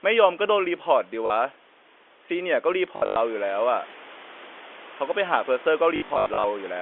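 Packet loss with last packet repeated at 1.26 s, 2.96 to 3.16 s and 5.96 to 6.44 s: lost 20 ms packets are refilled by repeats, giving buzzy robotic stutters.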